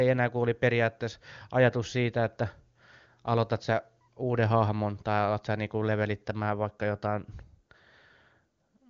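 No technical faults can be heard in this speech recording. It has passed through the AMR wideband (HD Voice) codec, and its band-limited but clear quality, with at most faint coding traces, fits the codec's highest rate of around 24 kbit/s.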